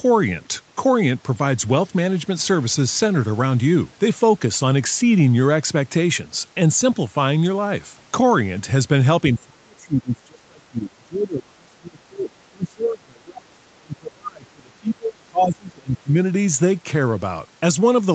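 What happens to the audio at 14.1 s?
At 14.1 s the speech is pulled far down, by up to about 30 dB, within a stretch from 9.34 to 16.17 s. This is likely speech suppressed in double talk: with both sides talking, the echo canceller mistook the local talker for loudspeaker echo and attenuated it.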